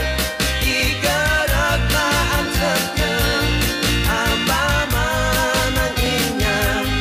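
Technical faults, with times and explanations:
0.80 to 6.06 s, clock drift buffer slips: mismatched device clocks likely force a small block of samples to drop or repeat every 1.75 s, heard as regular clicks.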